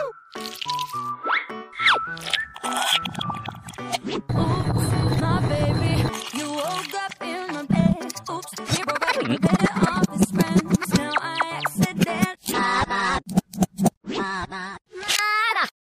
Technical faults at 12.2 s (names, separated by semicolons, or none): none